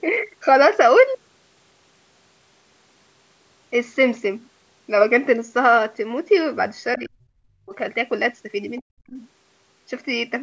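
A speech recording from a call shows two separate gaps in the talker's level. From 6.98 to 7.73 s the speech is pushed down hard, by something like 40 dB at its deepest, for most of that three-quarter-second stretch, and a shorter drop of similar depth follows from 8.81 to 9.15 s. Both are the pattern of speech suppressed in double talk, likely from an echo canceller that could not tell the local talker apart from the far end's sound arriving through the loudspeaker and so attenuated everything while both sides were active. Just before the second dip, at 8.76 to 8.81 s, a brief scrap of the other side's voice leaking through can be heard, very faint, around 35 dB below the talker. That points to residual loudspeaker echo the canceller left in the microphone signal, likely the same double-talk moment that then triggered the suppression right after it. The call's microphone processing is audible in the band limit, with nothing above 8 kHz.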